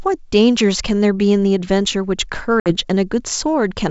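Packet loss on an ADPCM call, 2.60 to 2.72 s: a few packets vanish, leaving a 60 ms silent gap; the desynchronised predictor then brings speech back slightly distorted.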